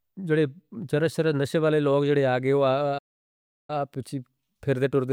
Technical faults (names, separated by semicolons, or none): playback stall